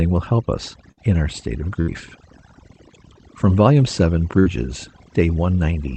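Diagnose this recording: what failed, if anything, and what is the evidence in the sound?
Overdone noise removal in the call processing, throughout: weak bands are gated away, leaving a near-black spectrogram background with twinkling specks.

Burst of packet loss on the network at 0.91 s (after "help us"), 1.81 s (after "in our state of") and 4.39 s: about 60 ms of concealment appears as a fading, smeared band, then roughly 60 ms of speech is skipped.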